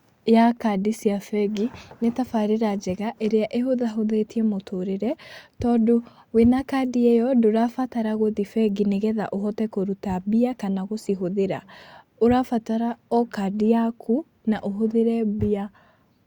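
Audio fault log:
Nothing to log here, as the speech comes through without any fault worth noting.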